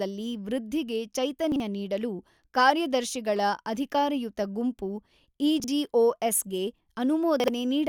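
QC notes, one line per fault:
1.52–1.60 s, chunks out of order: two 40 ms chunks swapped, the late one played second, giving a jumbled blip; the waveform steps and the spectrogram shows formant tracks jumping at three vertical broadband lines.
5.60–5.68 s, chunks out of order: another pair of 40 ms chunks reversed, so the sound is briefly jumbled; three hard joins appear as waveform discontinuities and thin vertical spectrogram streaks.
7.40–7.48 s, chunks out of order: again one 40 ms chunk lands a chunk late, producing a garbled moment; spectrogram shows broken harmonic contours with broadband lines at each splice.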